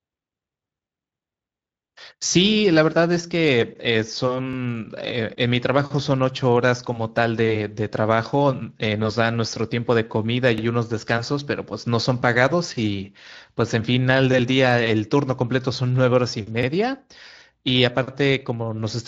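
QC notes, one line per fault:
4.53 s, 10.58 s and 16.63 s: overlapping chunks. Every 6 seconds a new chunk begins 50 ms before the previous one ended, so that slice of speech plays twice and is heard as a brief stutter. The waveform shows a repeated 50 ms segment with a step at each join, and the spectrogram shows a thin vertical seam there.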